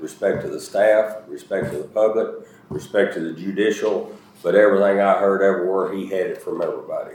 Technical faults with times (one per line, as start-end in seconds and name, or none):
none